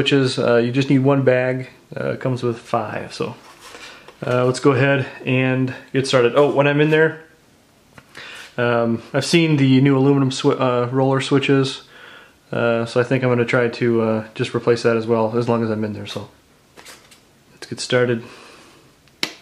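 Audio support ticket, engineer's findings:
No audible faults found in this recording.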